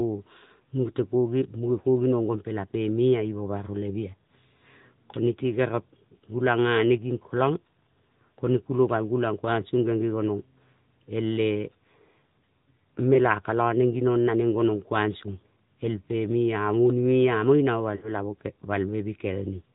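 The whole clip runs through the AMR narrowband mobile codec, so nothing above 4 kHz survives, and the speech has a buzzy, synthetic edge that fits the 10.2 kbps mode. Lost AMR speech frames hit at 13.14 s, a brief 20 ms dip, and again from 17.96 to 18.12 s, where the decoder stretches the last good sound for about 60 ms and it fades before recovering roughly.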